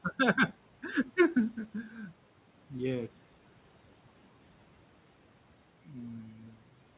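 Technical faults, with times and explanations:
6.31–6.56 s: speech cut by the noise suppressor. The suppressor mistook part of the speech for background and turned it down by up to about 9 dB along with the room noise, so those sounds come out swallowed and faint.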